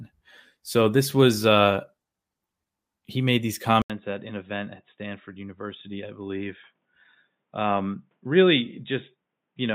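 At 3.82 s an 80 ms gap opens, then the speech returns dull, boxy and slightly quieter with faint background noise: the input likely switched to a poorer device. The spectrogram is empty above 3.8 kHz from there on, and the waveform shows the gap and smaller peaks.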